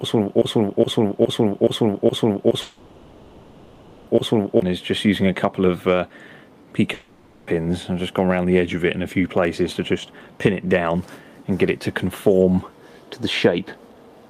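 From the start to 4.62 s, a broken-record loop is under way. A 0.42 s piece repeats exactly, ten times, likely from a stalled stream.

Long network dropouts occur at 2.61 to 4.09 s and 6.93 to 7.49 s. Audio likely stopped arriving. A buzz or hiss continuing the last sound fills each gap.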